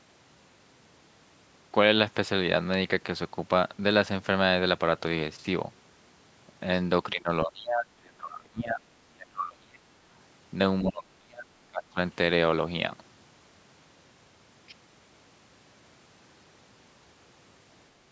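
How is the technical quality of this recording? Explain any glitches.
The speech repeatedly dips and breaks up in three stretches, from 7.13 to 8.87 s, 9.16 to 9.89 s and 10.81 to 11.98 s. The level falls by roughly 25 to 30 dB at worst and the sound turns thin and choppy. That is speech suppressed in double talk, likely from an echo canceller that mistook this talker for loudspeaker echo while both sides spoke. The call microphone processing band-limits everything to 8 kHz.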